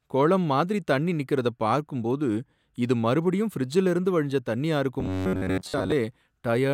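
From 5.00 to 5.92 s the speech collapses into robotic sound from repeated short buffers: a rigid, metallic buzz near 94 Hz that still loosely tracks the words. The likely cause is audio arriving too seldom, so playback loops a fragment of about 10.7 ms, and most of the real signal in that stretch is skipped. Unlike codec warble, the buzz stays locked at one fixed rate rather than smearing or bubbling.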